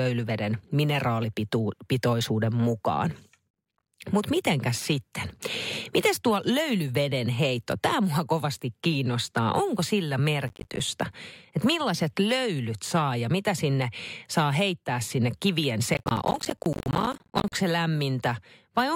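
A processor overload crackle hits three times. The processor repeatedly misses deadlines for buffers of around 10 ms, and each missed buffer drops out as a hard-edged silent gap. Right after "mineraalipitoisuuden mukaan" (3.51–3.92 s), at 10.48–10.80 s, and longest after "saa heittää sinne kivien" (15.94–17.53 s), gritty crackle rides on the speech.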